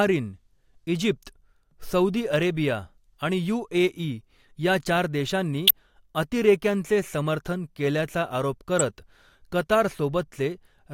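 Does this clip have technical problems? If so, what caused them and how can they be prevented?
Yes. There are two corrupt frames decoded, at 5.67–5.71 s just before "अतिरेक्यांचे समर्थन केल्याचा आरोप" and at 8.79–8.81 s just after it. Flipped bits made the decoder apply wrong gains and codes across a couple of frames each time. That put energy at the wrong frequencies, heard as brief chirps, squeaks, blips or noise bursts peaking near -5 and -10 dBFS. On a spectrogram they appear as narrow vertical smears, and on the waveform as short spikes. Error-checking the stream and concealing any frame that fails the check, instead of decoding it, would prevent this.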